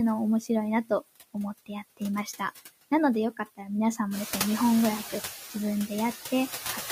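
From start to finish the speech runs through noise suppressor artifacts. The suppressor judges, frame by frame, which frequency bands hold steady noise and pulls them down, here by about 11 dB, so the noise drops away in pauses and returns beneath each phrase. The room noise climbs by about 12 dB around 4 seconds, making that pumping plainer. On a spectrogram the noise floor shows dark gaps between syllables and lighter fill under them. The waveform's quiet stretches fall lower.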